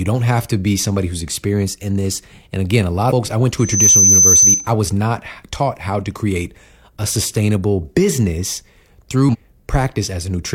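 At 3.07 to 3.12 s, between "again a" and "I went", damaged data in the compressed stream makes the decoder lose sync, producing a short glitch. It shows as a brief broadband smear on the spectrogram and a discontinuity in the waveform. The same corruption recurs at 9.29 to 9.36 s, after "a sustainable business through".

From 3.58 to 4.71 s, after "I went" and before "was not taught how", a loudspeaker feedback squeal rings at 6.1 kHz. The microphone-loudspeaker loop exceeds unity gain there, so the tone swells over roughly a third of a second to about 10 dB above the speech. On the spectrogram it appears as one bright horizontal line.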